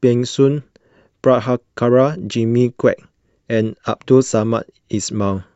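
No technical faults are audible.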